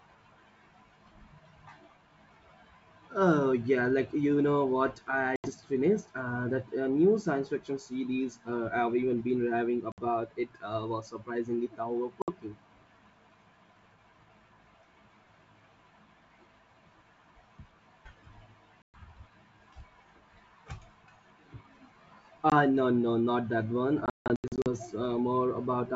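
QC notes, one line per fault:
5.36–5.50, 9.92–10.08, 12.22–12.29, 18.83–19.04, 22.50–22.53 and 24.06–24.67 s, packet loss on an ADPCM call: lost packets (about 20 to 120 ms each, and about 380 ms scattered across the final burst) are filled with silence and the decoder's predictor and step size lose sync, so hard-edged gaps are followed by a click, wrong level or brief distortion.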